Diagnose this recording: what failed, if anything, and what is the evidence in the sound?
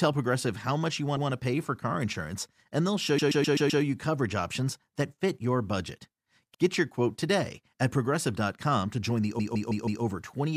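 A run of compressed frames was delivered to the decoder more than once, at the codec or storage stage, so the same stretch of speech is played again. The speech stutters at 1.17 to 1.30 s, where a 128 ms block plays one extra time, and at 3.18 to 3.82 s, where a 128 ms block plays five extra times. A 64 ms block repeats once at 6.54 to 6.61 s, and a 160 ms block plays four extra times at 9.39 to 10.03 s.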